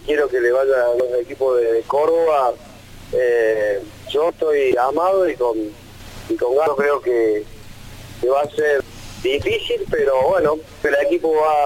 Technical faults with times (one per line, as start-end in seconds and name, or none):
1.00 damaged data in a compressed stream
4.72 damaged data in a compressed stream
6.67 damaged data in a compressed stream
8.80 damaged data in a compressed stream
10.85 damaged data in a compressed stream